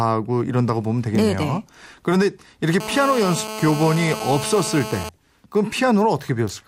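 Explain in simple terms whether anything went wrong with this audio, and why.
GSM phone buzz runs from 2.80 to 5.09 s. A nearby mobile phone on a call sends radio pulses 217 times a second, and the recording circuit turns them into a harsh, raspy buzz at that rate, nearly steady and unrelated to the speech.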